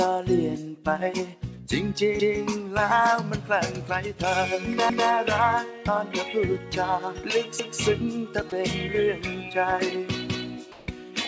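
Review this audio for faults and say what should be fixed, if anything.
Overlapping chunks cause a stutter at 2.20, 4.90, 7.60 and 10.30 s. At each point, about 200 ms of sound plays twice, from the join to 0.2 s later. The joins fall every 2.7 s. That pattern fits 2.5 s chunks, each starting 200 ms before the previous one ended. The repeated slice lands right after the seam and is heard as a short jump back. To prevent it, trim the overlap or crossfade it before the chunks are joined.

Sound dropped by the voice detector appears briefly from 8.50 to 8.52 s. A 20 ms stretch turns into flat, steady noise. About 10 ms of real sound is lost in that gap. The likely cause is the sender's voice detector briefly treating the sound as background and pausing transmission, with the receiver filling the gap. The cut is short. To prevent it, lower the detector's threshold or lengthen its hangover time so quiet moments keep being sent.

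Comfort noise in place of the background runs from 10.72 to 10.88 s, about 160 ms. The real background, sitting about 25 dB below the loud parts, is swapped for a smooth, featureless hiss. The level drops by about 1 dB. A discontinuous-transmission pause likely caused it, with synthetic noise shaped to match the background. The call path's G.722 codec at 64 kbps can be heard in the band limit, with nothing above 8 kHz. To prevent it, disable discontinuous transmission for this stream.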